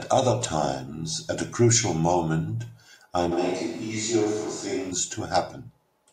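From 3.33 to 4.9 s the speech suddenly turns roomy and hollow, losing bass and body, then snaps back just as abruptly. The loudness stays roughly the same through the change, but a layer of room noise comes up underneath, sitting around 25 dB below the speech. This is likely a switch to a distant microphone: the close microphone's signal dropped out and a farther pickup carried the recording instead.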